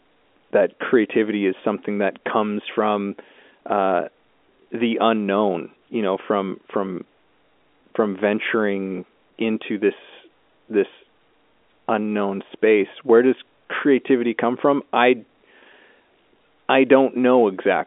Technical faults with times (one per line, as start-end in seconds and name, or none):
none